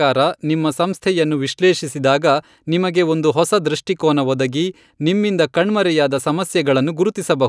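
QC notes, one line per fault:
No faults heard.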